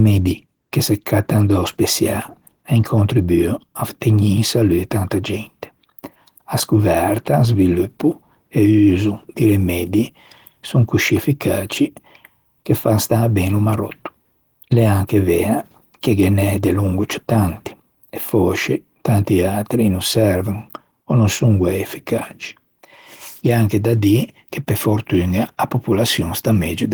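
Opus voice compression runs through the whole speech clip, with plainly audible damage: the voice sounds hoarse and slightly robotic from coarse excitation coding. The band reaches about 20.2 kHz, so it isn't muffled, and the texture fits hybrid-mode Opus near 16 kbps.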